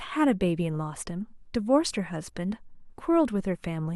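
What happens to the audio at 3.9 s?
Nothing goes wrong at 3.9 s; the speech runs on intact through that moment to the end of the clip.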